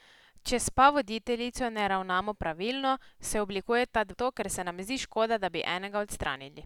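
At 4.13 to 4.15 s the speech jumps abruptly forward with a brief blip, as though part of the talk has gone missing. This is a stream segment skipped: most likely one chunk of the segmented stream failed to load, and playback carried on from the next one. On a waveform the envelope breaks sharply at that point, with a short spike. A spectrogram shows a thin vertical line and a sudden change in the harmonic pattern on either side.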